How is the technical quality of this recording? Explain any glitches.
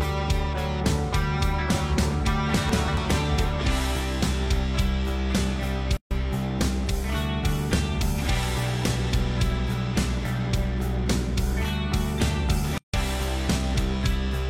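The recording has three glitches, one from chunks out of order and two from gaps at joins of encoded pieces.

From 2.69 to 2.97 s, chunks play out of order. A chunk of about 93 ms arrived or was written two chunks late and plays after the two that should follow it. Nothing is missing, but the sequence jumps, with three hard joins. This is heard as a brief garbled, jumbled moment.

At 5.97 to 6.11 s and again at 12.78 to 12.94 s, there are gaps at joins of encoded pieces. Separately encoded sections were joined without trimming the encoder's start delay and final-frame padding. Gaps of 140 ms and 157 ms cut into continuous sound, their edges smeared by the codec, before the audio resumes where it stopped.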